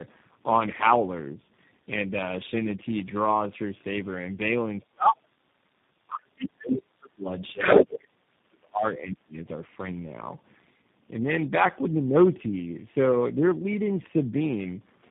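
Speech runs its full length sounding rough, muffled and warbly, with nothing above about 3.8 kHz. That is tandem speech coding. The grain and smearing fit roughly three speech coders in a row, at least one of them a low-rate G.729A-type coder, with the signal decoded and re-encoded at each hop so every stage compounds the previous one's losses. The talker's voice also sinks or breaks up in three stretches, from 4.8 to 5.92 s, 6.23 to 7.61 s and 8.08 to 9.37 s, falling by roughly 35 to 40 dB at its deepest. This is speech suppressed in double talk: the likely cause is an echo canceller that could not separate the near talker from loudspeaker echo while both sides spoke, so it pulled the whole signal down. Around those gaps a second voice comes through. It is a brief scrap from 6.08 to 6.21 s, about 10 dB under the main speech, then a longer stretch from 7.43 to 8.07 s, about 10 dB louder than it. 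This is the other side's voice leaking through, likely because the echo canceller left part of the far end's loudspeaker playback in the microphone signal.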